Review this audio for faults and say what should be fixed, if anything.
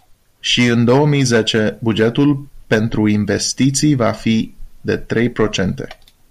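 Nothing here needs fixing, since the speech comes through without any fault to point at.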